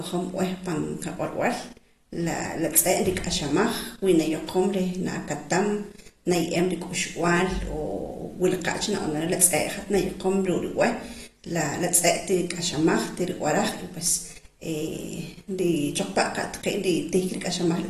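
From start to finish the speech sounds dull and smeared, with nothing above 12.4 kHz and a warbly, fizzy edge on sibilants. That's likely AAC compression, an AAC-LC encode starved of bits, which fits something around 32 kbps.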